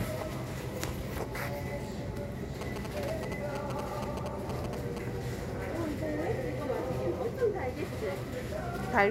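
From 2.61 to 4.98 s, a nearby phone's rectified GSM signalling bursts gallop as short 217 Hz buzzes, grouped rather than a steady hum.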